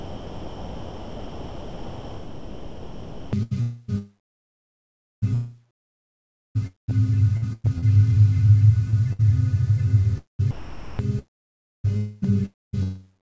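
A recording of everyday sounds carried over a call link whose content stops at about 8 kHz, consistent with a wideband codec such as G.722, is heard chopped by the voice detector from 0.00 to 12.75 s. About 8.5 s of that stretch is missing, with quieter passages and the edges of sounds gated out and replaced by synthetic comfort noise. The gating points to the sender's voice activity detection, likely misjudging low-level material as silence.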